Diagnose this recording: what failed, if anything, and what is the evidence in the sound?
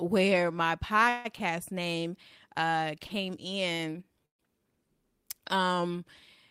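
Call audio freeze at 1.09–1.27 s and 4.26–4.41 s, at the network stage. The first stretches the last sound for about 150 ms. The second falls almost entirely silent. Nothing is lost afterwards. Held-up packets likely drained the jitter buffer.

Short stall from a late packet at 3.07 s and 3.75 s. The receiver briefly holds a sound for 25 ms, then 36 ms. The audio then resumes where it paused.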